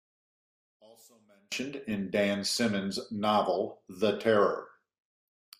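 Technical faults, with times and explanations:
0.00–1.52 s, one channel inverted: one stereo channel likely had its polarity reversed, so summing left and right to mono cancels everything they share. The centred speech falls by about 33 dB, leaving only a faint trace of the channel differences.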